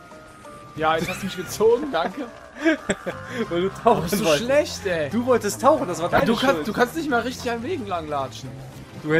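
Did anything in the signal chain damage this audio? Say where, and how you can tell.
Yes. DAB burbling at 2.90 to 2.98 s and again at 6.16 to 6.22 s, each a short burst of burbling over the programme. This is damage at the reception and codec stage. Weak DAB reception let bit errors, at a rate of roughly 0.2 and 0.15 percent, slip past error correction into the MP2 stream. Corrupted samples then put short blips of noise in single sub-bands, and corrupted scale factors make sub-bands jump in level for up to a frame, consistent with several frames being hit.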